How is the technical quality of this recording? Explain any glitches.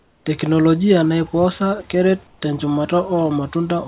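The recording carries a call-path fault: twice the real background is swapped for comfort noise. The audio also stops at 4 kHz, which fits a narrowband G.711 A-law call codec, and room noise sits about 37 dB below the speech.

Comfort noise in place of the background, 0.00–0.26 s and 2.27–2.42 s: the sender likely stopped transmitting during speech pauses, and the receiver filled the gaps with synthetic noise. The room's background turns smooth and featureless, about 6 dB and 5 dB quieter respectively.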